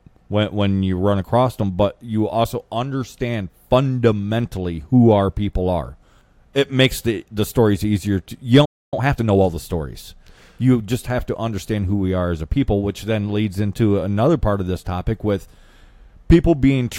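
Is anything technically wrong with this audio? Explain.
Yes, the speech breaks off and then rushes to recover.

Playback stall, 8.65 to 8.93 s: the speech cuts out in mid-flow and leaves about 275 ms of dead silence before it resumes. The likely cause is that the player's buffer ran dry or its output thread was held up, so nothing reached the output until data flowed again. The gap is long enough to hear as a hitch rather than a natural pause.

Time-compressed catch-up, 8.93 to 9.47 s: once the sound returns, the player works off the backlog the stall built up by trimming small slices and cross-fading the joins. The speech runs at 1.5 times normal speed for about half a second while the pitch stays where it belongs. The spliced pieces give it a hurried texture until normal pacing resumes.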